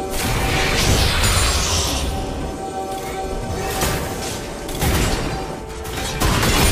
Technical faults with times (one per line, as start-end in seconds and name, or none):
none